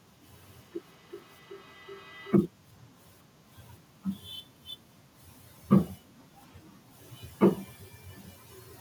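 Feedback echo between two devices, 0.37 to 2.42 s, in speech: a second device's playback is picked up again, returning roughly every 400 ms, at most about 25 dB below the speech.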